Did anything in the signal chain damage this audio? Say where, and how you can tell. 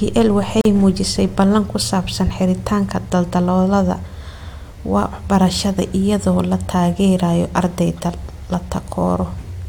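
Yes. A gap at a join of encoded pieces opens at 0.61 s and lasts about 41 ms, ending at 0.65 s just before "muujisay ballan ku saabsan". The damage happened at the codec stage, when separately encoded pieces were joined. The speech drops abruptly into silence, with edges smeared by the codec, then resumes exactly where it stopped. That pattern fits an encoder's start-up delay and end padding left untrimmed at the join.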